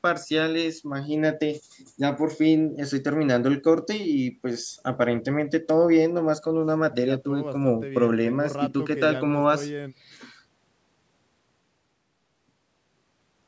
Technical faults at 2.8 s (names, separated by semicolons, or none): none